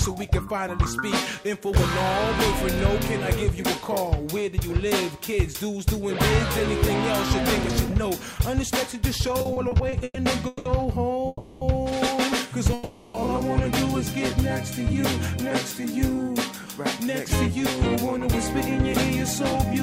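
From 9.39 to 10.67 s there are repeated stalls, a stutter. The sound halts eight times and drags. Packets were arriving late, so the jitter buffer kept running dry. The receiver stretched the last sound to fill 440 ms, about a third of that stretch. The longest hold lasts 180 ms. Nothing is lost.

Two call audio freezes follow, at 11.27 to 11.63 s and at 12.73 to 13.16 s. The sound hangs as a fading buzz or hiss for 340 ms, then 410 ms. The first dips briefly into silence. It then resumes where it stopped. The likely cause is packets held up in transit, leaving the buffer empty.

From 15.43 to 16.24 s a jitter buffer slow-down drags the audio to 96% speed at the same pitch. The buffer was rebuilding its reserve. It repeated single pitch periods or bits of pauses to add about 35 ms, so sounds are slightly drawn out.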